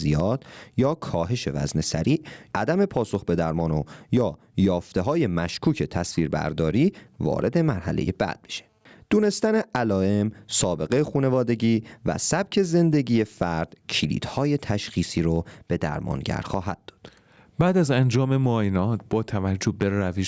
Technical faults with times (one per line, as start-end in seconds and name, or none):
0.00-20.27 gain pumping